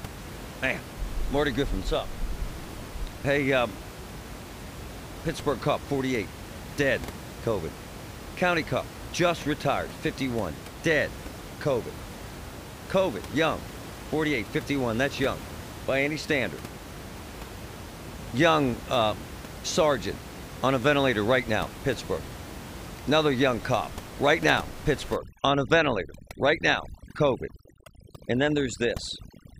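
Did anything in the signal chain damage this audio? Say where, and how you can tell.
Yes. Overdone noise removal in call processing hits 25.16 to 29.6 s. Room noise, about 14 dB below the speech, drops and breaks up into twinkling specks. Bands near the noise estimate are cut hard. Quiet speech goes too.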